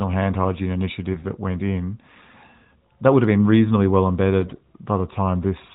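A speech recording carried over a narrowband mobile link that sounds like AMR-NB near its top rate, with nothing above 4 kHz. It has two bursts of AMR bit errors, at 1.12 to 1.26 s and 4.40 to 4.60 s. The pitch and level roughly hold, but the sound turns hoarse, scratchy and gargly. Flipped bits in the weakly protected parts of the frames misplace the excitation pulses and skew the fine gain and spectrum values. The second burst is the rougher one, at about a tenth of bits wrong against about seven percent.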